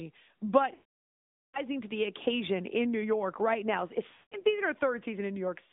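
Throughout, the speech carries plainly audible AMR narrowband mobile codec damage. The line is confined to roughly 200 Hz to 3.7 kHz, and the vocal-tract model leaves a buzzy, synthetic edge that suggests a mid-rate mode of about 10 kbps.

Lost AMR speech frames occur from 0.74 to 1.61 s. The decoder repeats the last good settings with falling gain, so the sound drags out and fades to silence before speech returns weak. From 4.08 to 4.47 s, scattered losses of up to 180 ms produce dips and warbling.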